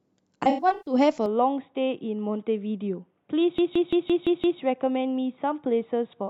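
From 0.43 to 0.94 s the speech breaks up with AAC frame loss with concealment. About 0.28 s of audio is missing, spread across roughly 0.43 s in several gaps, the longest around 150 ms. The decoder patches each gap by re-using the spectrum of the last good frame with scrambled phase and adjusted energy. The result is a smeared, noisy, phasey stretch rather than clean dropouts.

At 1.26 s the tone changes abruptly and stays changed to the end of the clip. Everything above 3.8 kHz disappears, so the sound turns dull and boxy, with no silence at the transition and no obvious jump in level. A faint new noise floor appears, some 50 dB below the signal. This is likely an input switched to a poorer device, such as a fallback microphone or a headset running its narrowband call profile.

From 3.58 to 4.61 s a system hang loop takes over. The computer or driver stalls while the audio hardware keeps replaying its ring buffer, so one 170.67 ms slice of sound repeats exactly six times. 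The repeats come at 5.86 Hz, which gives a rhythmic machine-gun stutter. The loop length fits an 8192-sample buffer. When normal playback resumes, essentially no audio appears to have been skipped.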